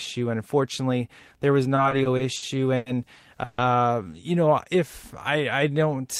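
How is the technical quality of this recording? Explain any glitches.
The speech is marred by two network-related glitches.

From 1.75 to 2.88 s there are repeated stalls (stutter): six short gaps, the longest 100 ms, totalling 240 ms, about a fifth of that span. Late packets emptied the jitter buffer, so the last sound was stretched. On a spectrogram, brief smeared bands interrupt the speech's patterning.

At 3.44 to 3.60 s a call audio freeze holds the sound for 140 ms, likely from packets delayed by 140 ms on the way. The last sound continues as a fading buzz or hiss before the speech resumes unbroken. The waveform shows a repetitive, decaying stretch, and the spectrogram shows a flat, smeared block.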